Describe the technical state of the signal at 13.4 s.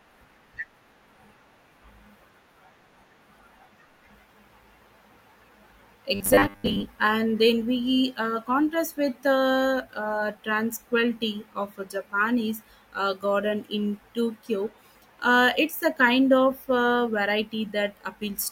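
At 13.4 s the speech signal is intact, with no dropout, clipping, glitch or other technical fault audible at that moment.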